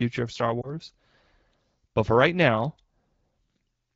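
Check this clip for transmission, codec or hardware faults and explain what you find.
One transmission fault is audible: a lost AMR speech frame between 0.61 and 0.71 s. The wideband AMR-WB coding at 12.65 kbit/s is working normally, with light codec coloring.

Lost AMR speech frames, 0.61 to 0.71 s: radio errors made a frame fail its checksum. The decoder repeated the previous pitch and vocal tract settings at falling gain. That produces a brief dip or warble, consistent with a single 20 ms frame, before speech returns weak or rough for a moment.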